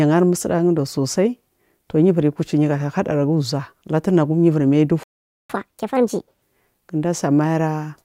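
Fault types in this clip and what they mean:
Playback stall: The speech cuts out at 5.03 s and stays silent for about 0.46 s, until 5.50 s. This is likely the player running short of data or being blocked. Output resumes once it recovers.
Catch-up at higher speed: From 5.50 s to 6.42 s the speech runs at 1.5 times normal speed. Pitch rises by roughly seven semitones as the backlog is resampled. It then returns to normal speed and pitch.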